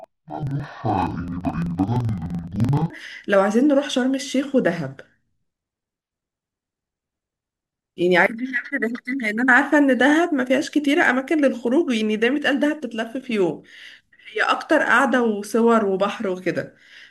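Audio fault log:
0.00–2.93 s, interleaved audio read as planar: speech sounds an octave low, doubled and choppy, because alternating samples were split into halves per 42.67 ms block, fitting a 2048-sample block.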